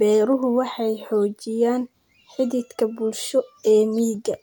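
No technical faults can be heard anywhere in the recording. The speech carries on without any break or disturbance in the signal.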